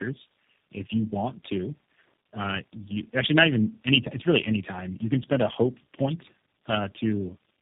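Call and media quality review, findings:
Tandem speech coding throughout: audio points to roughly four speech codecs in series, likely G.729A at the ends, each re-encoding prior losses; rough, muffled, warbly, nothing above 3.8 kHz.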